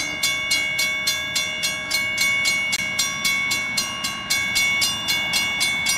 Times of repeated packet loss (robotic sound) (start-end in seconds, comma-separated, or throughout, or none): none